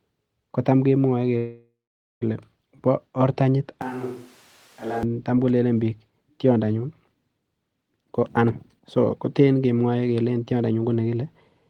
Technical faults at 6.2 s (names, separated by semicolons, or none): none